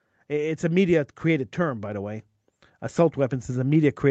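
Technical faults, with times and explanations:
0.11 to 2.25 s, automatic gain rising: the call's gain control judged the input too quiet and eased it up about 4 dB, so speech and background swell together.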